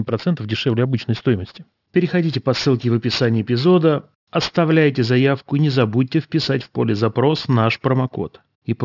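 Aliasing throughout: content above 6 kHz, unfiltered in what sounds like a drop to 12 kHz, folds back as gritty sibilance roughly 20 dB down; the spectrogram runs hard to 6 kHz.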